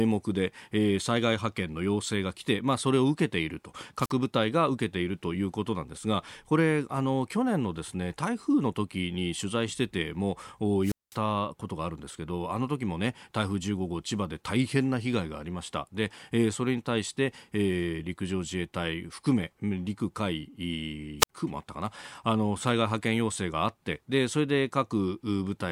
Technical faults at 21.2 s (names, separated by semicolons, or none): wireless microphone squelch dropout